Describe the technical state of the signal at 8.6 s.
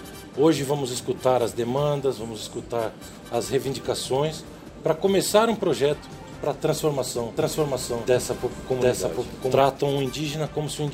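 A doubled audio track runs from 7.37 to 9.59 s: a second full-band copy trails about 0.7 s behind at roughly equal level, likely from a slower duplicate capture path, starting and stopping abruptly.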